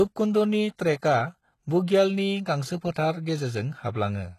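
Low-bitrate HE-AAC compression, likely around 16 kbps, rebuilds the treble from copied lower bands, so the speech's upper range sounds gritty and metallic, with nothing above 12.3 kHz. At 0.76 to 0.79 s, pre-echo spreads quantisation noise across the block ahead of the attack, leaving a 24 ms hiss before "ट्रेकआ बुग्यालनि" and softening its onset.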